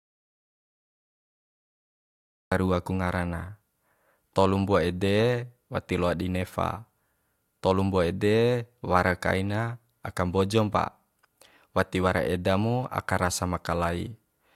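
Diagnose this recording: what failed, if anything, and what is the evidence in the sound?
The input failed at the source end, an audio dropout to silence that is already under way when the clip begins and lasts until 2.52 s. Those first seconds are complete silence, with no room tone or noise floor, and the speech then starts abruptly mid-flow. The likely cause is a lost input at the wiring or device link while the recorder kept writing zeros. A noise gate or fade-in would leave residual hiss or a ramp. This gap is flat silence, so whatever was said there is gone.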